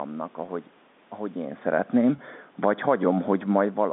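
Right through the clip there's channel delay causing comb filtering. One channel trails the other by a fraction of a millisecond, and summing them to mono cancels the shared content at regularly spaced frequencies, starting around 3 kHz. The speech comes out hollow and phasey.

At 0.46 s, and again at 2.16 s, there's packet loss with pitch repetition. Each dropout is about 20 ms, which fits a single lost packet. The receiver fills it by repeating the last pitch period, so you hear a brief held, buzzy blip before normal speech resumes.

From 2.80 s to 3.41 s the automatic gain is rising. The input had dropped by about 13 dB, so the gain control nudged its level up by about 5 dB over that stretch. Voice and room noise swell up together rather than the speech alone getting louder.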